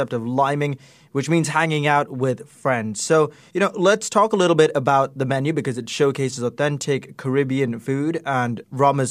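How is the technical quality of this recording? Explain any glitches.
The technical quality of this recording is sound, with no glitches to explain.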